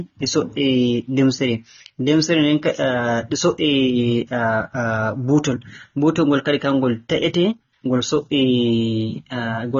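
A speech clip with AAC compression damage running its whole length, plainly audible throughout. Nothing sounds above about 6.9 kHz, so the sound is dull, and the texture is smeared and warbling, most likely from AAC-LC at a low bitrate, which fits roughly 24 kbps. The warble sets it apart from a simple low-pass filter, which would dull the top end but leave the remaining band steady rather than churning frame to frame.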